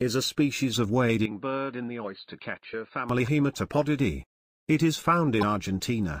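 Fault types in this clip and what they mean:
Input switched to a poorer device: From 1.26 to 3.09 s the sound turns dull and boxy, with nothing above 4.7 kHz, a level about 10 dB lower and a faint new background noise well below the signal. It then clears again at 3.09 s, with no gap at either change. This is likely the input switching mid-recording to a narrower-band microphone or headset profile with its own tone, gain and noise.
Damaged data in a compressed stream: Brief blips at 2.70–2.74 s and 5.39–5.43 s, each lasting about 40 ms. At these points part of the compressed stream is corrupt. The decoder misreads the frames there, loses its place, and outputs garbled material until it locks onto the next valid frame header. The first blip falls inside the dulled stretch.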